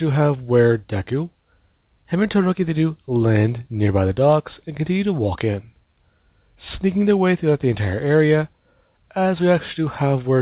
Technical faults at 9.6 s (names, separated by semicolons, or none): none